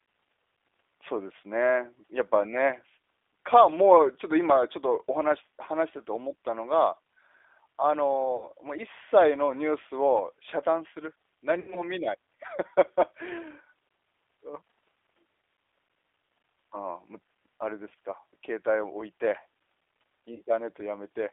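The speech runs throughout through a G.729 codec, which fits an 8 kbit/s line. It rebuilds the voice from a filter and pitch model in a 300 to 3500 Hz band, so it sounds plainly rough, thin and synthetic. VoIP packet loss concealed by the speech codec follows at 8.36 to 8.48 s, 11.60 to 11.87 s, 17.89 to 17.92 s and 20.34 to 20.42 s. Each time, the decoder stretches its last frame into a fading buzzy tone or coloured noise, and the speech stays weak just afterwards.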